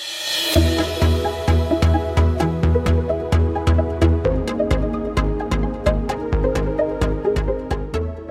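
No dropouts, clicks, distortion or level and timing problems turn up anywhere in the audio.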